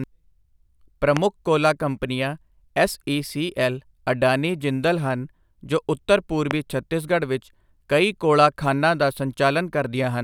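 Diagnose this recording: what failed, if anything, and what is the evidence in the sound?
Two sharp loud pops at 1.17 s and 6.51 s jump well above the speech, likely voltage spikes from static or a switch in the analogue wiring.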